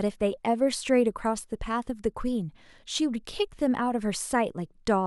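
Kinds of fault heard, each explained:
No technical faults can be heard in this speech recording.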